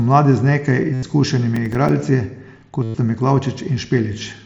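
From 0.94 to 1.03 s, and again from 2.83 to 2.95 s, concealed Bluetooth headset packet loss sets in. About 90 ms and then about 112 ms of headset audio never reached the phone, and the receiver filled each gap by repeating the best-matching recent slice of waveform. Each run sounds like a steady buzzy tone at full level with a slight warble as real speech resumes. It is periodic rather than broken up.

Between 1.56 and 1.89 s, processor overload crackle appears. Several audio buffers of only a few milliseconds each were missed again and again over this short stretch, and each miss left a short hard-edged silence. The result is a gritty tearing laid over the speech through the mSBC headset link. Unlike the concealed loss, it has no sustained tone, just scattered clicks that stop once the load clears.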